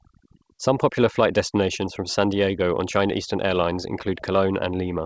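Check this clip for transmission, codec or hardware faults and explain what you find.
The clip has three faults: overdone noise removal, and clock drift between sender and receiver, which shows up as repeated timing corrections. It carries G.722-coded speech, which has nothing above 8 kHz.

Overdone noise removal runs through the whole clip. The noise suppressor was set so aggressively that any frequency band close to its noise estimate gets pushed down hard or switched off. Low-level parts of the speech fall below that threshold along with the noise. The background becomes near silence flecked with small twinkling artefacts.

Clock drift between sender and receiver is also present throughout. The sender's clock runs roughly 4 percent fast relative to the receiver's. Audio therefore arrives slightly faster than it is played out, and the jitter buffer keeps creeping toward full. To stop it overflowing, the receiver has to keep discarding small amounts of audio. 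On its own the drift is inaudible. It is heard through the corrections it forces.

Repeated timing corrections span 0.06 s to 4.99 s, running at a speed of 104 percent. Because the sender is fast, every correction goes the same way: the receiver trims short pieces of audio to keep its buffer in check. The cuts are small and unevenly spaced. If heard at all, they come through as faint hiccups and a slightly hurried, uneven pace in the speech, not as clear gaps.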